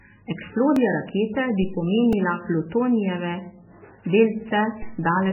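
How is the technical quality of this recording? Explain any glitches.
The recording has heavy codec damage throughout, plus two repeated-buffer glitches and one DC step.

MP3 compression: The sound is watery and swirly, with nothing above 3 kHz. The likely cause is low-bitrate MP3 encoding, about 8 kbps, which drops weak frequency lines.

Repeated buffer: At 0.76 s, just before "rakete bi", a tiny piece plays twice. At 2.13 s, just after "rakete bi", it plays five times. Late audio made the device replay its last buffer. Each piece lasts about 1.33 ms, which fits a 64-sample buffer, so it is heard as a click or brief buzz.

DC step: At 4.83 s the waveform's zero line jumps, then decays back. It is heard as a low thump or click while the sound continues.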